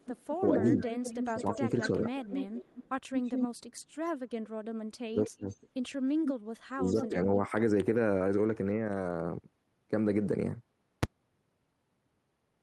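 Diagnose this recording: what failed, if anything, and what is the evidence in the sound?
A delayed second copy of the speech trails the talker by about 0.2 s from 0.00 to 3.48 s, nearly as loud as the original. It returns faintly from 5.23 to 5.56 s at about 206 ms and briefly from 7.02 to 7.07 s at about 207 ms. This is echo leak in call processing. The far end likely plays the call on a loudspeaker, and its echo canceller lets part of the microphone pickup return.

The talker's level sinks while the other side is speaking. Between 0.50 and 2.08 s it dips modestly, by about 10 dB, over roughly 0.4 s in total. From 5.10 to 5.45 s it almost vanishes, dropping by about 30 dB. Between 6.71 and 7.52 s it falls about 25 dB for around half a second. This is speech suppressed in double talk: the canceller likely cannot separate the near talker from loudspeaker echo and attenuates both.

At 11.03 s a single sharp bang breaks through, far louder than anything around it. 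It lasts one block of about 5 ms pinned at one extreme value. The stage is a numerical failure in processing or sample-format conversion: invalid numbers at full scale. A calculation produced infinite or undefined values, and these were clamped to the maximum sample value for that block, so the whole block plays as one flat extreme-value burst.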